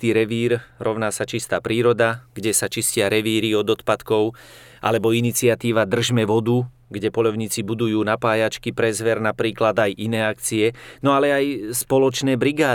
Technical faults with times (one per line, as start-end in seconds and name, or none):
2.13-5.25 pre-emphasis left on